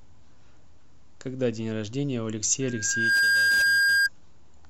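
At 2.61 s a loudspeaker feedback squeal begins. A microphone is picking up the loudspeaker it drives, and at 1.6 kHz the loop gain tops one, so that tone keeps reinforcing itself. It swells over about half a second into a piercing whistle roughly 10 dB above the speech, then stops at 4.09 s. On a spectrogram it shows as one bright horizontal line at 1.6 kHz. The waveform's envelope bulges as the tone grows.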